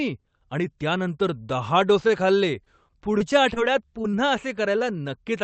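At 2.07 to 2.11 s there is a short stall from a late packet. The jitter buffer ran dry, so the receiver held the last sound for about 18 ms and then resumed from the same point. Nothing is lost, but one sound lingers with a faint buzz or dip. On a spectrogram the harmonics run flat and unchanged across that sliver. In the waveform, a few near-identical periods repeat before the signal picks up again, now slightly later.

From 2.64 to 3.58 s there is repeated packet loss with a robotic edge. Four separate holes remove about 80 ms in total. The longest is 22 ms. Each hole is patched by extending the preceding sound, and about 8% of the stretch is filled this way. The result is choppy. A spectrogram shows four brief smeared or frozen patches where the formant movement stops. In the waveform, the envelope shows small repeated or softened segments.

Between 4.02 and 4.16 s, short concealed packet loss occurs twice, with a second, overlapping hole at 4.12 to 4.15 s. 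Each hole loses about 20 ms and is bridged by synthesised continuation, and the first adds around 10 ms of delay. It sounds like a quick wobble or smear. On the spectrogram, detail blurs and the edges soften. The waveform shows a smooth, slightly repetitive splice where the detail should be.

At 4.78 to 4.82 s a second late-packet stall holds the sound again for about 18 ms, with the same flat, stretched look on the spectrogram.

Across the whole clip, the Opus call path cuts off energy above 8 kHz, and the coding noise points to a bitrate of about 20 kbps.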